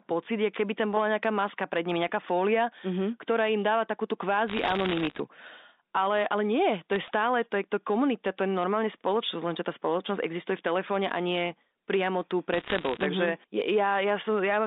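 Bit errors on a digital phone line break into the speech in three bursts: 4.48 to 5.20 s after "ktorá im dáva takúto", 6.93 to 7.08 s before "to je to komunita", and 12.54 to 13.06 s after "a nie priamo tu". Each flipped bit corrupts one 8-bit A-law sample, producing sharp ticks that form crackle over intact band-limited speech. The first and last bursts are denser, which fits an error rate near 1 percent.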